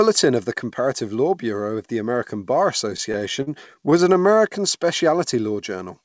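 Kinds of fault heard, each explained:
Repeated stalls (stutter): Audio arrived late, so the receiver's jitter buffer kept running dry. Between 2.90 and 4.35 s there are fourteen brief stalls, each up to 44 ms and about 176 ms in all, filled by stretching the last sound. Nothing is lost, but the speech drags and stutters.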